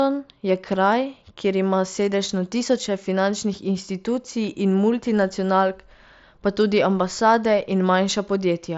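There are no technical faults in this speech to describe in time order.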